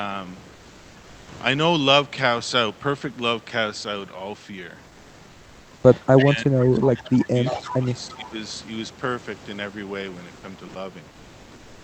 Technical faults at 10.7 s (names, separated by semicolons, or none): sound dropped by the voice detector